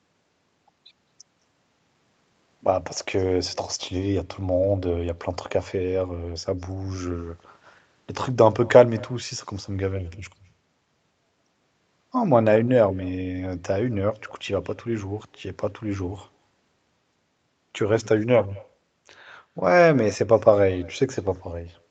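All the way through the clip there's an echo with no canceller: the far end's loudspeaker feeds back into its microphone, so every phrase returns about a fifth of a second later as a faint, thin copy, around 26 dB down, above audio that tops out near 8 kHz.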